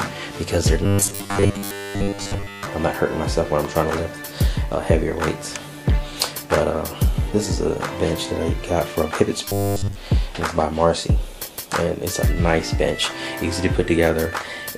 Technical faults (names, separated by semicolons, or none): robotic sound from repeated short buffers